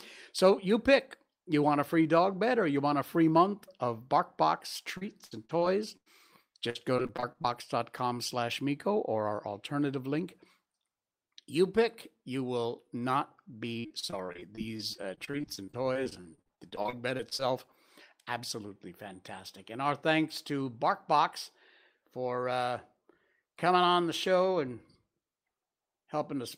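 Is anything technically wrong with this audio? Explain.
Yes. From 4.97 to 6.08 s, 6.70 to 7.46 s, and 13.8 to 17.44 s (after "pick you will not") the speech turns choppy, with pieces missing. This is repeated packet loss: short gaps, each under 0.1 s, are patched by stretching the preceding sound.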